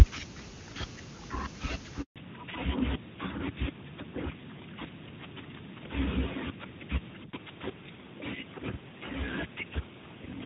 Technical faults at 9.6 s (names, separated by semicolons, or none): fallback to narrowband